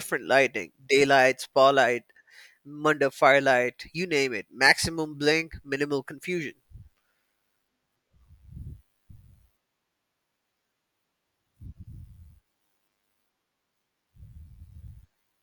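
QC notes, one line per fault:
No faults found.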